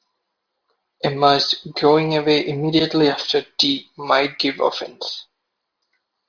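Speech, with no audible technical faults at any point.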